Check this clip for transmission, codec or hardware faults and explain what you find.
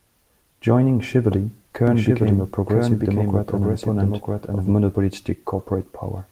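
One fault is present: a doubled audio track from 1.87 s to 4.71 s. Over that span a second, full-band copy of the speech runs about a second behind the original at roughly the same level. It has no decay or room colouring, and it cuts in and out abruptly at the span's edges. The likely cause is the signal being captured a second time through a slower path, or an edit leaving two out-of-step copies mixed together. The Opus voice coding shows only light, expected damage.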